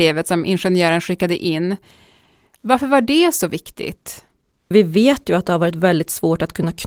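No faults found in the speech; the full bandwidth and faint coding texture fit Opus in hybrid mode at around 20 kbps.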